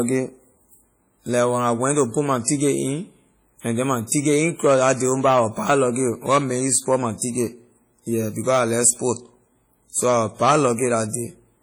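WMA compression damage runs throughout this speech clip, from start to finish: the sound rings and smears, with a washy hiss that swells and fades along with the speech. The likely cause is a Windows Media Audio version 1 encode, whose long transform blocks spread quantisation noise across tens of milliseconds and zero out weak spectral lines. The damage is heavy, which fits a low bitrate around 32 kbps, and nothing is present above 20.1 kHz.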